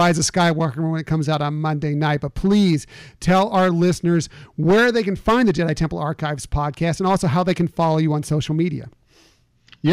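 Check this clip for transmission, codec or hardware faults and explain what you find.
Hard clipping runs through the whole speech recording. The signal is driven about 10 dB past what the stage can pass, so a few percent of samples hit the ceiling and are sliced flat. The flat tops add high harmonics, giving a harsh fuzz on every loud syllable. Unlike codec distortion, it tracks level and spares quiet passages.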